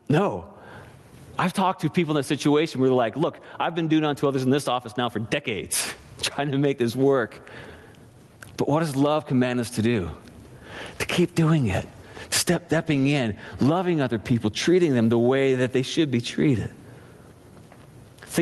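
Gain pumping runs through the whole clip, with a level swing of roughly 25 dB. The likely cause is input gain set far too high, with a fast limiter or compressor clamping it on every peak. Unlike a noise gate, which cuts the background off in the gaps, this lifts it up there, and the speech itself comes out squashed. The call path also cuts the top end off at 12 kHz, consistent with Opus at around 32 kbps.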